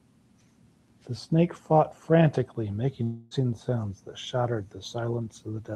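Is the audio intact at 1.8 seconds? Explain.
Yes, at 1.8 seconds the speech is intact, carried through the call path with only that path's ordinary coding and nothing breaking into it.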